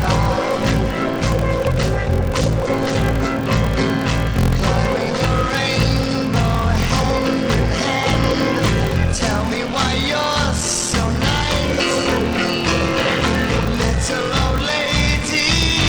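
Throughout, a block size mismatch (padded) zero-pads every block, fitting 1024-sample reads: a 43.1 Hz buzz, and 0.861 speed at normal pitch, unlike a sample-rate error.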